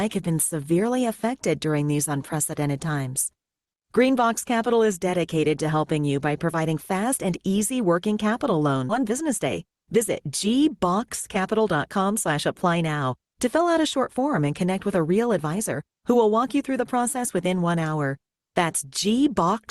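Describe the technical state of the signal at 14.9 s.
At 14.9 s the speech comes through intact, carried normally by the call codec path with no dropout, glitch or other fault at that moment.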